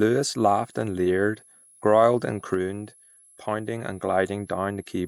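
Throughout the speech, a switching supply whistle sits about 30 dB down, wandering between 10.7 and 11.3 kHz; that drifting pitch separates it from a fixed-frequency tone.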